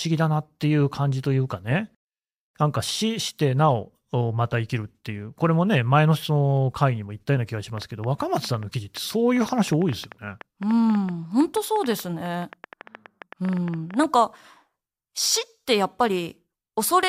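From 7.78 s to 14.05 s there's a train of clicks, around fifty sharp ticks at about 8.2 per second, unevenly spaced and poking a few dB above the speech, pauses included. It's likely interference from nearby equipment or a faulty connection or power supply.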